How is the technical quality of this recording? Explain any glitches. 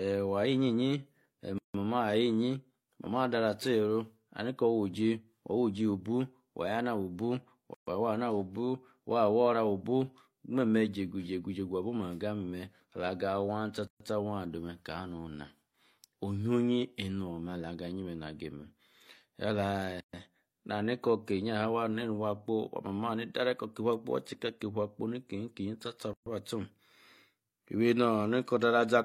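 The speech is broken by a repeating dropout: gaps at joins of encoded pieces, at 1.58, 7.74, 13.87, 20.00 and 26.13 s, one every 6.0 s. The first lasts 160 ms and the rest 130 ms each. Each 6-second segment was encoded on its own and spliced without trimming, so the encoder's start-up delay and end-of-segment padding remain as silence. The speech cuts out abruptly, with smeared edges, then resumes exactly where it left off.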